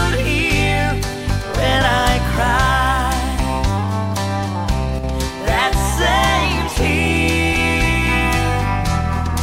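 The audio dips abruptly by about 6 dB from 4.99 to 5.04 s, then recovers unchanged, likely one channel dropping out briefly before the mono fold-down.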